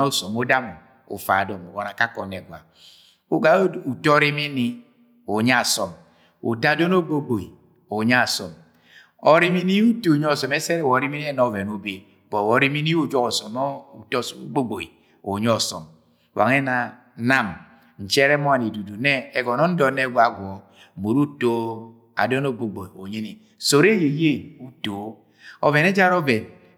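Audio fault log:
Nothing stood out on listening to this speech recording.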